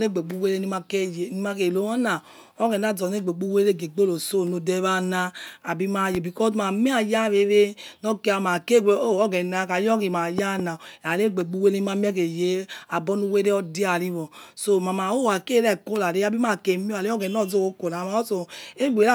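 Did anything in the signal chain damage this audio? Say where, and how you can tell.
Yes, in the analogue wiring. A loud pop at 6.15 to 6.17 s, then a double pop at 10.38 to 10.62 s, about 10 dB above the speech. Likely voltage spikes from a plug or switch.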